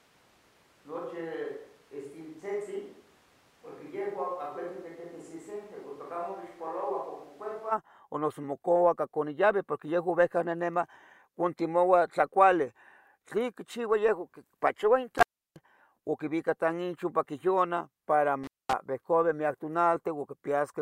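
Switch to a distant microphone, from the very start to 7.7 s in this speech clip: the sound is already roomy, hollow and thin in the bass, roughly 10 dB quieter, with room noise only about 25 dB under the voice, until it snaps back to close, full sound just before "o noso". The likely cause is that the close microphone dropped out and a farther one was used. Intermittent contact at 15.18 to 15.59 s, just before "o quivica tanchoquiviona para", and again at 18.44 to 18.73 s, just after that phrase: a loose connection opens for about 320 ms and then 220 ms, so the sound cuts out with crackle at each edge and faint hiss in the gap.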